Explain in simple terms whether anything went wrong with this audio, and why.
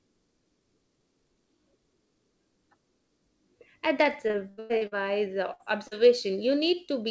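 Three separate network faults cut into the speech near the end of the call.

From 4.28 to 4.93 s there is repeated packet loss, which gives a robotic sound. Six times in that stretch, pieces of audio failed to arrive in time, the longest about a tenth of a second. Each time the receiver filled the hole by stretching out the last bit of sound. Nearly half of that stretch is this patched-in filler, which is why it sounds choppy and machine-like, with about 0.3 s of real speech lost.

At 5.53 to 5.61 s there is a burst of packet loss, a single run of roughly 60 ms that never arrived. The receiver held and faded the last sound across the gap, so you hear a short held buzz or hiss. The speech then picks up slightly further on, with that slice missing.

At 5.87 to 5.93 s there is a short concealed packet loss of about 40 ms. It was patched and blended back in quickly, so it comes across as a brief smear or wobble rather than a clear gap, though a quick consonant can disappear inside it.

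The call codec, G.722, passes nothing above 8 kHz, so the top end is cut off throughout. That limit is normal for this kind of call and is not a fault.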